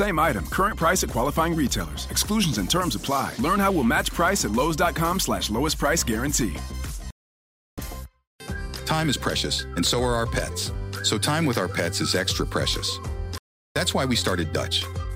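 At 7.11 s the audio drops out for about 0.67 s, a playback stall that likely comes from the player starving for data or its thread blocking. From 7.78 to 10.78 s comes the time-compressed catch-up: the sound runs about 1.1 times fast at normal pitch, as small chunks are spliced out and cross-faded. The same pattern repeats with a 0.38 s stall at 13.38 s, likely from the same cause, then catch-up from 13.76 s to the end.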